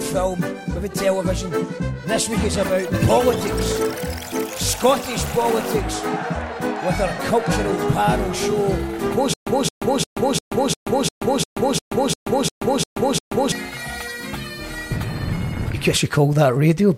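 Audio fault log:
9.34–13.52 s, stutter with silent gaps: playback likely stalled and, on each retry, replayed the last fragment it held before running dry. The same 219 ms burst of sound comes back 12 times at a steady 350 ms pace, each repeat followed by about 131 ms of dead digital silence. The result is a mechanical, evenly clocked stammer, and whatever audio belonged in those four seconds never plays.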